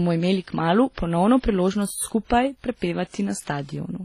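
Throughout, nothing sounds above 14.7 kHz and two distinct kinds of codec smearing overlap, unlike a single encode. This is likely transcoding between lossy codecs, WMA then HE-AAC.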